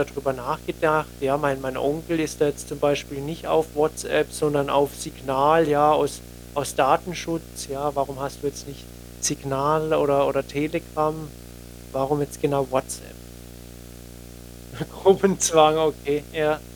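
Throughout the speech runs a video or display buzz: a screen or video cable couples into the audio, adding a rasping 60 Hz field-rate buzz with hash above it, about 20 dB under the speech. A spectrogram shows a steady 60 Hz line with harmonics stacked above.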